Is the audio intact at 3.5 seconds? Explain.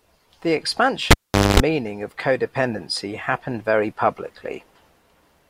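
Yes, at 3.5 seconds the speech plays through intact, with no dropout, click or distortion at that point.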